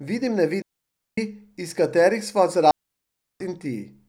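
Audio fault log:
0.62–1.18 s and 2.71–3.40 s, digital wireless dropout: the speech cuts to near silence twice, for about 0.56 s and then about 0.69 s, with no crackle or noise burst at either edge. The receiver lost too much of the incoming data stream to rebuild the audio, so it muted its output with a very fast fade instead of passing corrupted signal. That leaves clean holes rather than hiss or clicks.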